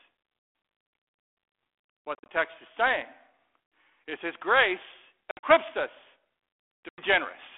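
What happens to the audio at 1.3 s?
Nothing goes wrong at 1.3 s; the speech carries on intact through the steady 300 Hz to 3.5 kHz telephone band of the 32 kbit/s G.726 ADPCM path.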